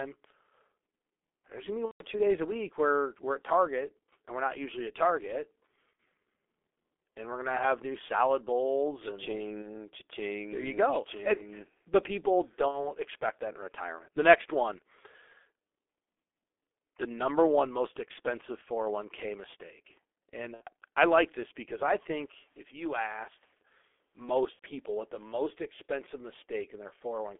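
Speech heard through the G.723.1 codec sounds muffled and hoarse, with smeared consonants, which fits a rate around 6 kbit/s; a spectrogram shows nothing above 3.5 kHz or below 300 Hz. Packet loss concealed by the speech codec appears at 1.86–2.03, 5.93–5.99, 9.62–9.69, 12.68–12.92, 20.54–20.63 and 24.53–24.63 s. Each is a buzzy tone or coloured noise stretched from the last sound and fading, which shows as a smear in the spectrogram and a decaying envelope in the waveform.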